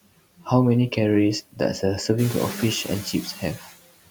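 Noise suppressor artifacts run through the whole speech clip. Steady noise is pulled down by about 18 dB between phrases and swells back under them; a spectrogram shows the noise floor pumping frame by frame. From 0.37 to 0.47 s, and again from 3.33 to 3.76 s, the suppressor mistakes speech for noise. These are speech cut by the noise suppressor: drops of about 15 dB and about 17 dB, roughly a tenth and a third of a second long, that leave sounds faint or swallowed. They appear as sudden dips in the waveform envelope and as gaps in the spectrogram. Room noise that rises by about 13 dB near 2 s sits about 13 dB beneath the speech.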